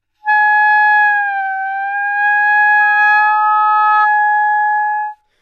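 A microphone picking up its own loudspeaker sets off loudspeaker feedback squeal from 2.80 to 4.08 s. At 1.3 kHz the loop gain climbs above one, so that frequency feeds itself and grows. In this clip it swells over roughly 0.7 s into a single-tone squeal that rises to about the same loudness as the rest of the sound, then stops at 4.08 s.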